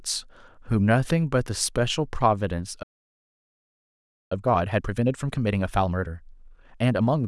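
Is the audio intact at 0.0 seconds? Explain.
Yes, at 0.0 seconds the speech is intact, with no fault present at that moment.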